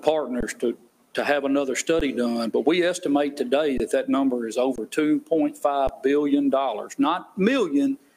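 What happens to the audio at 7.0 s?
Nothing goes wrong at 7.0 s; the audio plays through that moment intact, with no dropout, glitch or distortion.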